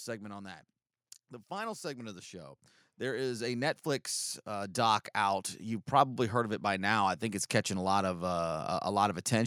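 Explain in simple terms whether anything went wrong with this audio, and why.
Right after the words "segment of the show," from about 2.98 to 5.52 seconds, the whole recording slowly gets louder. The talking and the background noise swell up together over roughly two and a half seconds. This is automatic gain rising: the recorder's automatic level control decided the sound coming in was too quiet and gradually turned itself up. Because it raises everything at once, the background comes up right along with the voice.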